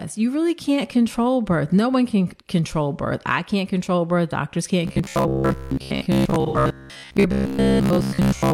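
From 4.88 s to the end, the speech turns into a rigid, metallic buzz fixed near 66.7 Hz: robotic sound from repeated short buffers, likely caused by a 15 ms stretch being replayed while most incoming audio is skipped. A spectrogram shows evenly spaced horizontal harmonics of that buzz, and the waveform shows identical short cycles.

Inside that stretch, from 6.46 to 6.57 s, AAC frame loss with concealment leaves a smeared, phasey patch about 85 ms long, which fits two missing frames. On a spectrogram it appears as a blurred, textureless block that breaks the harmonic stripes.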